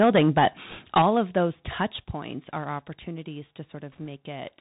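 The speech is carried over a Bluetooth CVSD headset codec for its full length, which fits a 64 kbps CVSD link. Nothing above 4 kHz survives, so the sound is flat and telephone-like. The one-bit delta coding leaves a granular hiss under everything, and because the adaptive step cannot keep up with loud, fast-changing high content, s sounds come out scratchy and edgy. The codec damage is plainly audible throughout.

Microphone overload is heard twice. From 0.0 to 0.48 s the peaks sit about 11 dB over the converter's limit, with roughly a tenth of the samples flattened. From 0.96 to 1.4 s they are about 10 dB over, with around one sample in twenty clipped. In both spans the loudest syllables get a harsh, crackling edge. The likely cause is input gain set too high, so the waveform tops are sliced off at the converter's limit.

The microphone volume is stepped down at 1.02 s by about 6 dB and again at 2.04 s by about 5 dB. 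Speech and background fall in level together and abruptly, with no fade. The first drop lands inside the second clipped stretch, which points to the call software likely reacting to the overload by cutting the device's input gain in single steps.

Bit errors on a Bluetooth voice link appear from 0.70 to 0.79 s and from 3.92 to 4.07 s. They sound like a brief rushing, crackly noise laid over the speech rather than sharp clicks. In CVSD each flipped bit only nudges the signal by one step, and the error decays away, so corrupted bits smear into noise. The earlier burst is slightly denser, at around one percent of bits, against somewhat under one percent in the later one.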